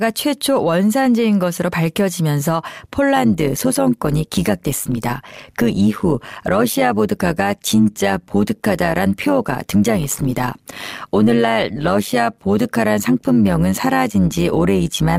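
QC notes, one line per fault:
3.16–15.19 s, overlap-add ripple: from here to the end the speech takes on a fast, rough flutter, a buzzy robotic tremolo riding on every syllable. The audio has been split into windowed frames and rejoined with an overlap whose windows do not add up to a steady gain, so the level dips and swells once per frame. The swing is about 11 dB, repeating at around 100 Hz, which is why it sounds like a grainy modulation rather than a slow pulse.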